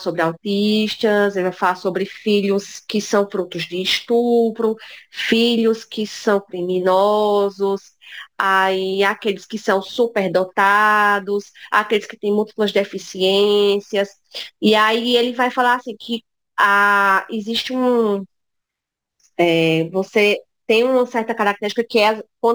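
Speech throughout with crude rate conversion across the whole clip: a gritty, inharmonic fizz sits roughly 30 dB under the voice and tracks louder, brighter syllables. It sounds like samples were simply dropped to the nearest position, which fits a 48 kHz to 44.1 kHz change with no filtering.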